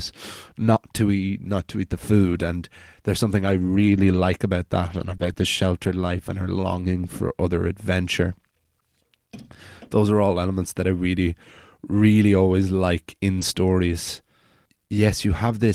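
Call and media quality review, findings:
Lost packets rebuilt from error correction: rough, noisy patches at 2.21–2.43, 3.37–4.15 after "and there's", 4.89–5.15, 5.21–5.31, 5.37–5.43, 5.83–5.89 before "life and her", 6.71–6.81 before "for other adventure", and 13.41 s. The Opus decoder played low-bitrate backup copies.

Short concealed packet loss: brief smears or wobbles at 5.17–5.21, 5.33–5.37 and 13.39–13.43 s. The jitter buffer and decoder filled about 20 ms gaps by extending the preceding sound.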